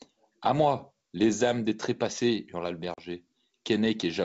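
At 2.94 s the speech drops into a hard-edged hole of about 40 ms, running to 2.99 s: packet loss on an ADPCM call, with a couple of lost packets filled by silence. On a waveform it is a flat silent stretch with abrupt edges. On a spectrogram it is a clean vertical gap across the whole band, which reaches up to 7 kHz as G.722 wideband coding does. When sound resumes, the decoder's adaptive predictor and step size no longer match the sender's, so the first few tens of milliseconds come back slightly distorted before settling.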